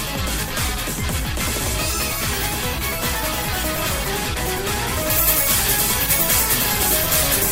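From 5.1 s to the end at 7.52 s, pre-emphasis is left on: the treble boost was never undone, lifting 10 kHz by about 10 dB over 1 kHz, which fits a 50 µs FM curve. Unlike an ordinary EQ boost, it follows that fixed rising curve, leaving the sound thin, bright and sibilant.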